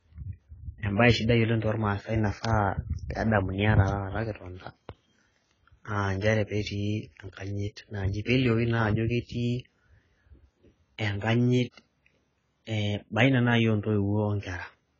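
Throughout, the speech sounds dull and smeared, with fizzy sibilants and nothing above 7.5 kHz. This is likely heavy AAC compression at a bitrate around 16 kbps.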